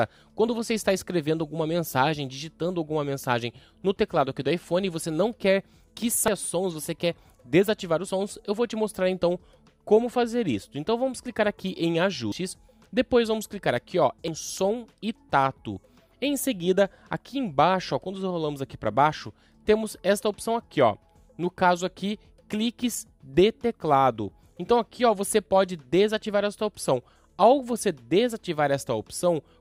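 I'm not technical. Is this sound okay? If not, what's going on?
No. A dropped buffer (overrun) is heard at 6.28, 12.32 and 14.28 seconds: a sudden jump, as if about a tenth of a second were cut out. Likely, the recording software fell behind and that chunk was overwritten before being saved.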